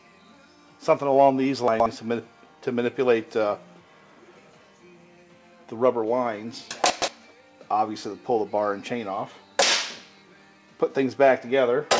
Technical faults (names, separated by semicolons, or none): chunks out of order